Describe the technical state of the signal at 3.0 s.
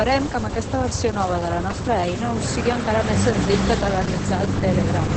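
At 3.0 s, as across the whole speech clip, Opus voice compression is audible: the SILK coder's wideband mode leaves nothing above 8.6 kHz and coarsely codes the excitation, suggesting roughly 10 kbps. Unlike a plain low-pass, it sounds hoarse and faintly robotic, not just muffled.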